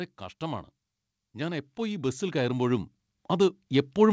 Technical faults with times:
1.33-4.12 automatic gain rising

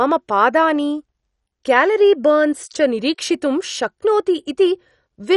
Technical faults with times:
0.00-5.37 MP2 compression

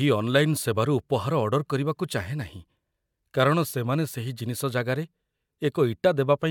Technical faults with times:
none

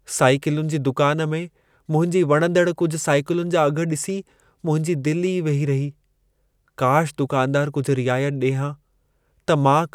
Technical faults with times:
none

